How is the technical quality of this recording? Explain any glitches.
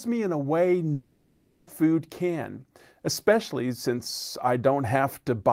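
The recording has one glitch, a long network dropout, where part of the speech is lost.

From 0.93 to 1.69 s, after "me in a way", incoming audio likely stopped arriving, and the receiver bridged about 0.74 s with a buzz or hiss that fades before resuming at "can especially since".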